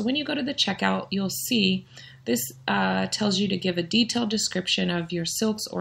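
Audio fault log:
No faults found; nothing to log.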